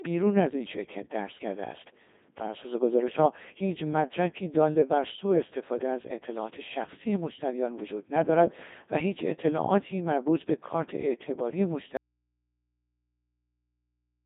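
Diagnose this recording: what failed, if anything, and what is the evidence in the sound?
The codec stage shows Codec 2 vocoder damage throughout. The speech is heavily degraded, robotic and buzzy, because it is resynthesised from pitch, voicing, energy and envelope rather than the waveform. Content spans 250 Hz to 3.7 kHz, with nothing above 3.8 kHz. This fits a 2.4 kbit/s mode.

From 11.97 s to the end, the signal cuts out abruptly, leaving only mains hum about 55 dB below the speech. This is an audio dropout to a faint residue. The path after the break stayed live, and the hum points to an open input, likely from a broken analogue wiring connection.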